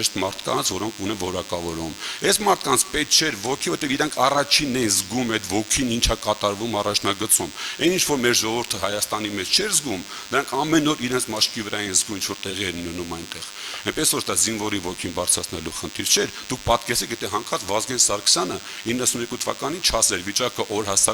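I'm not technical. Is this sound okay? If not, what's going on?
No. A thin, steady buzz runs under the sound from start to finish, a bit like an electric hum but rougher and more nasal, and fairly noticeable rather than faint. This is DECT cordless phone buzz. A cordless phone or its base station close to the recording gear was sending short radio pulses a hundred times a second, and the audio equipment picked them up and turned them into this 100 Hz buzz.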